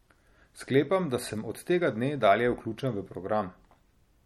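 Throughout the speech, the treble stops dead at 17.2 kHz. Weak detail flickers in and out, giving a watery, swirly texture, and s sounds chirp metallically. This is likely MP3 compression, starving quieter lines of bits, which fits a low bitrate near 48 kbps.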